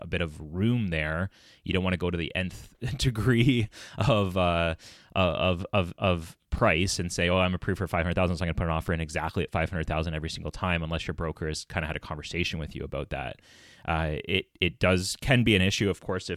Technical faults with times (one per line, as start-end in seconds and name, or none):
6.58 DC step
8.88 DC step